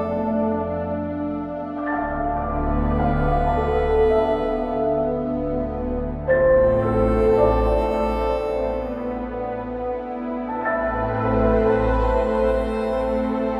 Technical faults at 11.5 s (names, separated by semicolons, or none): none